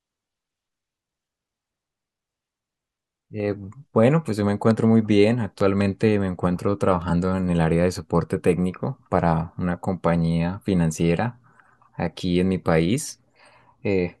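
At 4.71 to 4.73 s a single loud pop cuts through the speech, and from 5.61 to 5.83 s two more follow in quick succession, each peaking a few decibels above the speech. A sudden voltage pulse, likely from a plug, switch or static discharge, was added to the signal, and the later circuitry shaped it into a thump. Unlike a dropout or digital click, the speech carries on uninterrupted beneath each pop.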